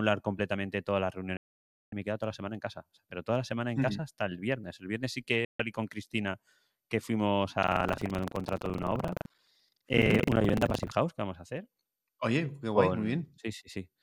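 A speech recording with two digital broadcast dropouts: at 1.37 to 1.93 s, just after "completamente todas las" and before "y me he toda", and at 5.45 to 5.60 s after "viernes sí". In each, the receiver lost valid frames and muted with a 3 ms fade for about 0.55 s and 0.14 s, fitting whole lost frames. The silent holes and clean returns distinguish them from tearing. From 7.60 to 10.92 s, after "que fuimos", buffer tearing produces a continuous robotic buzz at 23.4 Hz, which fits a 2048-sample buffer. About a fifth of each buffer replays audio from roughly 150 ms earlier. The result is rattling during the sound, with no gaps.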